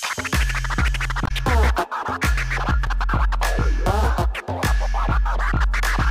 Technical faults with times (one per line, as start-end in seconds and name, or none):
1.24-1.31 damaged data in a compressed stream